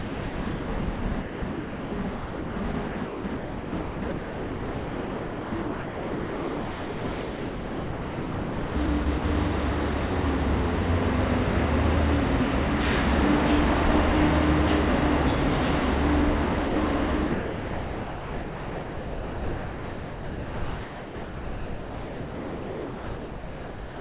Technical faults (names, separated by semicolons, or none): sound chopped by the voice detector; sound dropped by the voice detector